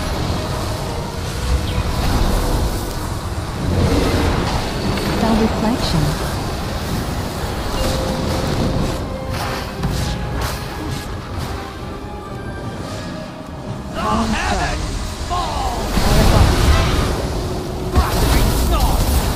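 The audio carries four bit error spikes, isolated ticks at 2.91, 7.73, 8.47 and 18.67 s, each peaking at about -8 dBFS and lasting only one or two samples. A flipped bit throws a single sample value far off by a power of two before it snaps straight back, so each tick is broadband and bears no relation to the surrounding sound. That brevity and randomness set it apart from a buffer-dropout click, which comes with a gap or jump in the waveform.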